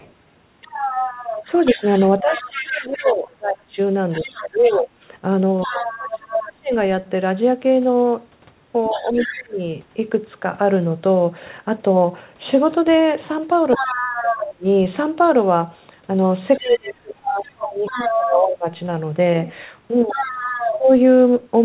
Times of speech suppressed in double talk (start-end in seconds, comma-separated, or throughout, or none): 1.44-9.59, 13.78-20.90